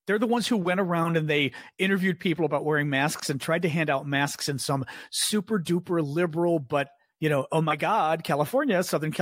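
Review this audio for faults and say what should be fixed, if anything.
Nothing in this recording needs fixing, as no faults can be heard anywhere in it. No change to how it was captured or delivered is called for.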